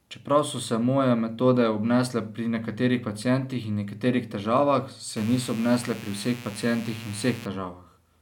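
At 5.17 s, right after "pacientih in nekaterih težavah", a mains buzz comes in and lasts until 7.46 s. It sounds like a steady, raspy buzz sitting roughly 20 dB below the speech. Sharp switching spikes, of the kind a dimmer, rectifier or unshielded cable lets in, arrive twice per cycle of 60 Hz mains. That spreads harmonics of 60 Hz up into the kilohertz range, which gives the buzz its edge rather than a smooth hum.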